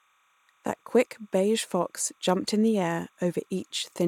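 Linear timecode running at 30 frames per second has leaked into the speech path from a neighbouring track or cable, and the timecode bleed is present from start to finish. Its square-wave code flips between tones near 1 kHz and 2 kHz as the bits change, so a faint, steady chirping warble sits behind the speech, roughly 40 dB below it, quiet but constant.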